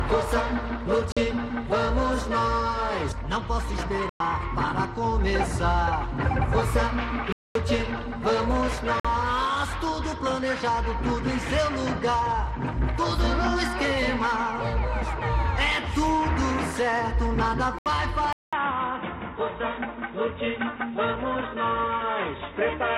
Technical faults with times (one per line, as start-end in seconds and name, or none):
1.12-1.17 Bluetooth stall
4.09-4.20 Bluetooth stall
7.32-7.55 Bluetooth stall
9.00-9.05 Bluetooth stall
17.79-17.86 Bluetooth stall
18.33-22.98 input switched to a poorer device